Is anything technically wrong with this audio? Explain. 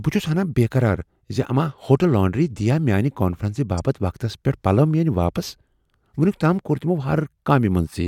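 Yes. At about 3.78 s the speech contains one corrupt frame decoded: a compressed frame arrived with flipped bits and the decoder played it as if it were valid. Misread gain values and spectral codes put energy into the wrong frequency bands for just that single frame, under 20 ms. It is heard as a brief chirp or blip that has nothing to do with the surrounding speech, peaking at roughly -20 dBFS.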